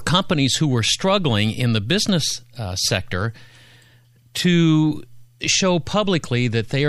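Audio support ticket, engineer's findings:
Speech signal checked over the whole recording with no technical faults found anywhere in the chain.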